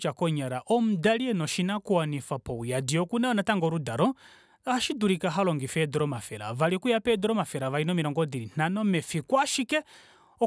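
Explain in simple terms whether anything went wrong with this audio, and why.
Nothing went wrong with this speech recording. At no point does the sound do anything that signals a technical problem.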